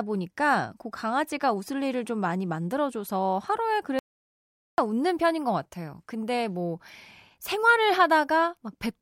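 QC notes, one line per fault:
3.99 to 4.78 s, audio dropout to silence: the speech cuts off mid-flow and returns about 0.79 s later, with the gap holding silence and no room tone. This likely comes from the input being lost while the recorder kept writing zeros.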